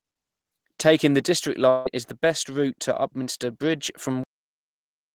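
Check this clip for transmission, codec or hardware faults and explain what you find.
Two faults stand out in this speech clip: a long network dropout and a cut-off end.

From 1.69 to 1.87 s there is a long network dropout. The sound freezes into a smeared, buzzy continuation of whatever came just before. It fades but never reaches silence. About 160 ms of speech is simply gone. When the signal returns, it picks up further on. The likely cause is a run of packets that never arrived, with the receiver's concealment stretching the last good audio across the hole.

At 4.24 s the clip has a cut-off end. The speech stops in the middle of a sound. There is no natural decay, just an abrupt drop to digital silence. That silence holds for the last 0.9 s. The final buffers were never written or played out, so the recording ends before the talker does.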